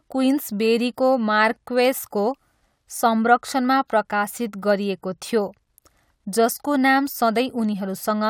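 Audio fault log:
Nothing to log here: the speech comes across with no audible faults at any point.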